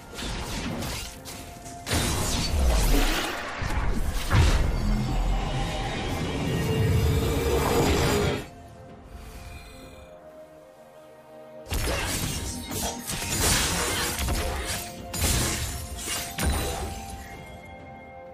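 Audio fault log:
No technical fault can be heard anywhere in the audio, and the signal holds steady from its opening moment to its final one.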